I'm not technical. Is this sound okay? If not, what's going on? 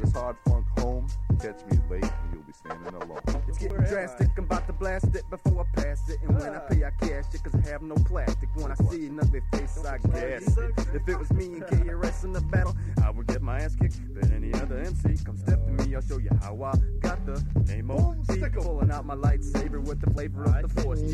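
No. At 3.70 s and 20.18 s the sound jumps slightly ahead, most likely a dropped buffer (overrun): the recorder missed a tiny slice, about 10 ms and then 20 ms, and joined the ends. Unlike a dropout, there's no silent gap, just a skip.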